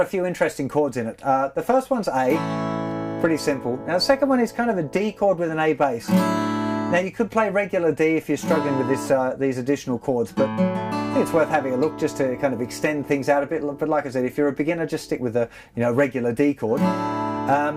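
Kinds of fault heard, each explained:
No technical faults heard.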